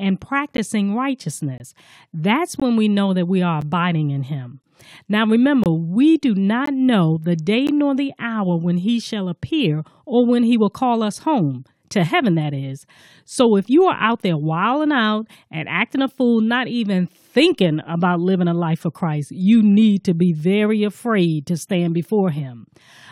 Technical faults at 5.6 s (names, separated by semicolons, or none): gap between stream segments